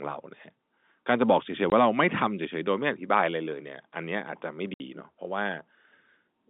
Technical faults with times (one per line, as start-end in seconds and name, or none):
1.70-1.72 packet loss filled with silence
4.74-4.80 packet loss filled with silence